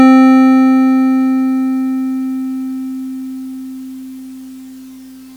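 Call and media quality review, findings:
No audible faults found in the music; nothing to trace to any component.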